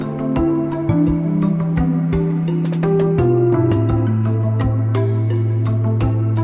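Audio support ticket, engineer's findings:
No faults found on listening; signal path audibly intact across the clip, nothing to attribute to any component.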